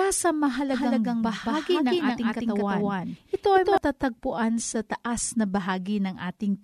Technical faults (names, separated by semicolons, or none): doubled audio track